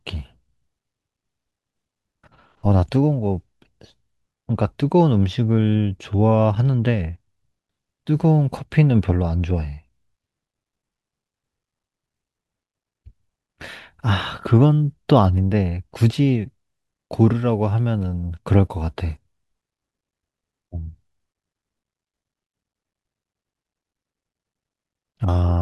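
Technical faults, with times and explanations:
No technical faults can be heard in this speech recording. There is nothing here to time or explain.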